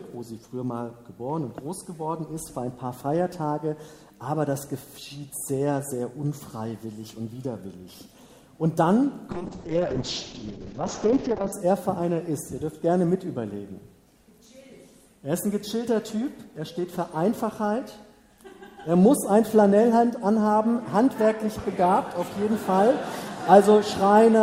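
From 9.31 to 11.58 s a call bitrate drop sets in: the encoder, starved of bits, cuts the top end from 20 kHz to 8 kHz and codes coarsely, so the sound turns muffled and watery, consistent with roughly 6 kbps. Unlike packet loss, nothing drops out.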